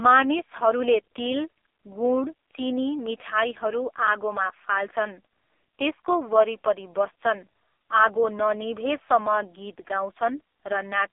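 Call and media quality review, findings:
Thin, boxy, buzzy, synthetic speech throughout; nothing above 3.6 kHz, little below 300 Hz. AMR narrowband mobile codec (AMR-NB), heavily compressed, consistent with its 5.15 kbps mode: vocal-tract model driven by too few pulses per subframe.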